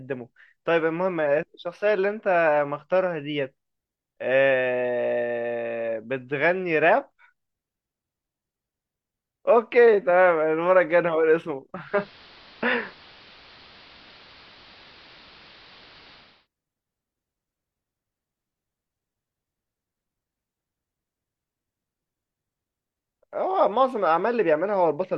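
At 11.73 s the speech fades, over about 0.35 s, into the analogue AM version of the same station. This is digital radio blending to analogue: the receiver lost its digital stream and fell back to the AM feed. The treble is cut back. The level shifts by about 5 dB. A steady hiss rises, sitting roughly 30 dB under the speech. At 16.48 s the sound blends back to digital.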